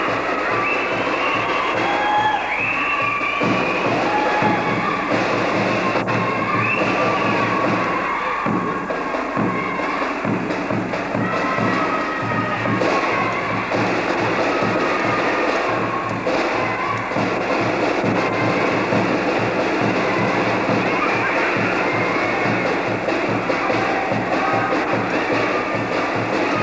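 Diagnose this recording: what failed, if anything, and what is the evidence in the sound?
Nothing has failed here: the signal has passed through a call path and carries its ordinary coding character, with no content above 8 kHz, consistent with a wideband call codec such as G.722.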